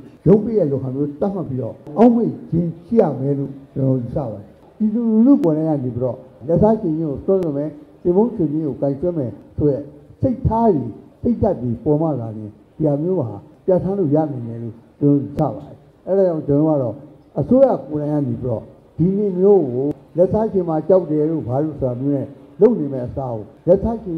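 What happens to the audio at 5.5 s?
Right around 5.44 s there's an overlap between stream segments. Two neighbouring chunks, about 2 s long each, claim the same stretch of time, so the player trims the overlap and a sliver of real audio disappears. The waveform jumps there, giving a small click or skip.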